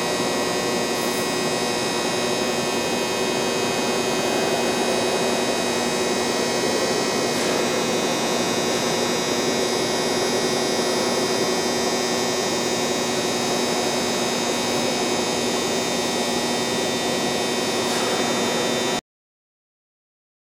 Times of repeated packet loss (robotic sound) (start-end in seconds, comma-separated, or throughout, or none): none